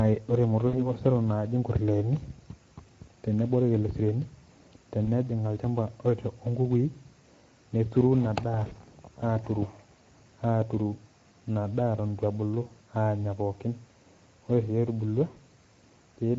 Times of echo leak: none

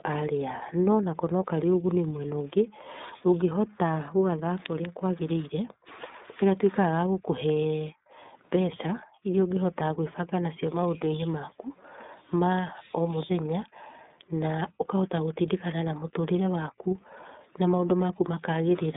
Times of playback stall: none

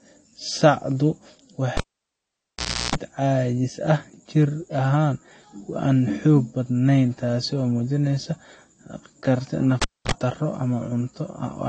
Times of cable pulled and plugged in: 1.77-2.95, 9.82-10.12

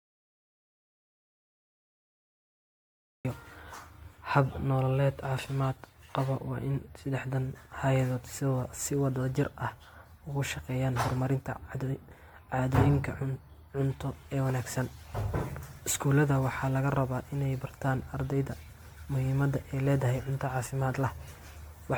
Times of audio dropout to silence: 0.00-3.25

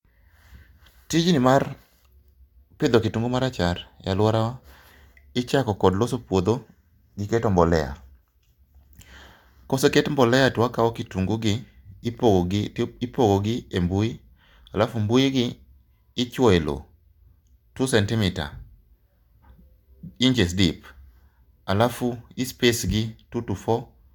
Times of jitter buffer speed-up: none

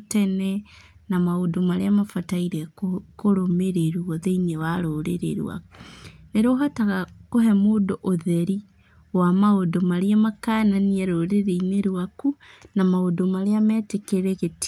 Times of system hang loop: none

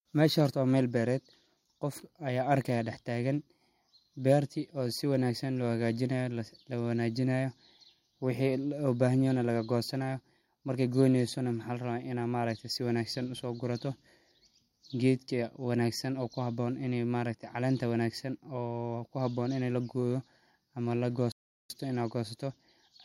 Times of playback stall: 21.32-21.70

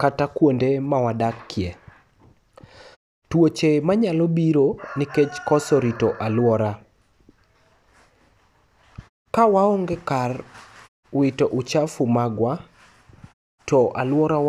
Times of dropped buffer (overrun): none

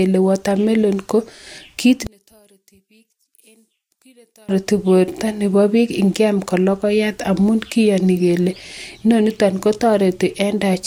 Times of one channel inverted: 2.07-4.49

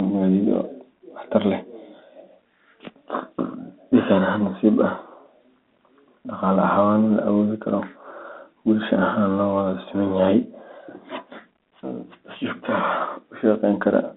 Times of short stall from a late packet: none

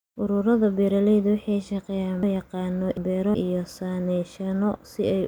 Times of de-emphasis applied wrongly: none

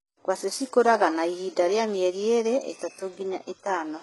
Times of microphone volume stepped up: none

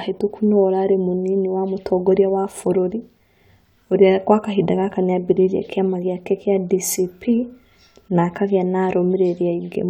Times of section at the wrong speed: none

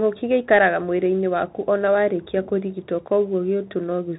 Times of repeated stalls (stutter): none

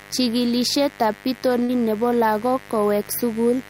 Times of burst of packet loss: 1.63-1.71

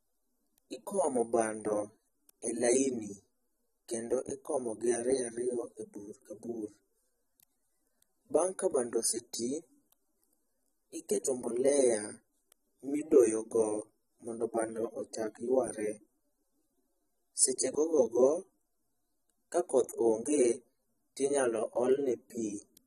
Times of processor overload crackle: none

